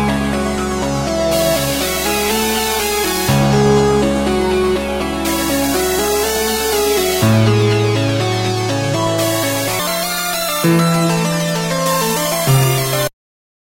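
At 9.79 s the audio lurches into a section at the wrong speed and stays there until the clip ends at 13.61 s. It's running about 1.61 times too fast, so everything turns quick and squeaky together, with pitch jumping up roughly seven semitones and the sounds hurrying along. Since speed and pitch shift as one, it's likely this last stretch was played back or fitted against the wrong clock.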